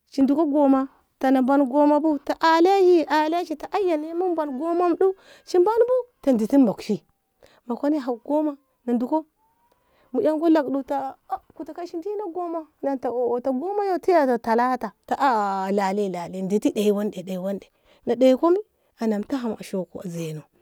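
No technical faults are audible anywhere in this speech recording.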